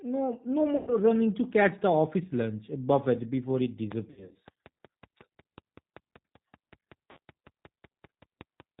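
The speech sounds rough, slightly synthetic and thin throughout, with nothing above 4 kHz. That is G.729 codec damage, plainly audible here: at 8 kbit/s the decoder rebuilds each 10 ms frame from a vocal tract filter, a pitch predictor and a handful of pulses.

From 0.77 to 0.93 s, right after "no no" and before "running to catch the", the sound smears into a buzzy tone or coloured noise that fades, and the voice stays weak briefly afterwards. This is VoIP packet loss concealed by the speech codec. About 100 ms went missing, which fits five 20 ms packets, and the decoder stretched its last pitch and filter with falling gain. After "uh buffet before it", the same concealment recurs from 4.11 to 4.36 s. There, about 160 ms was lost in scattered gaps across 240 ms, the longest run 60 ms. A shorter 60 ms loss is heard at 7.11 to 7.18 s.

From 3.92 s, just after "uh buffet before it", to the end at 8.80 s, a steady ticking runs over the audio and through the pauses. 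This is a train of clicks, about 5.3 per second at a regular pace, roughly thirty in all, peaking about 15 dB above the signal. The likely cause is interference from nearby equipment or a faulty connection or power supply.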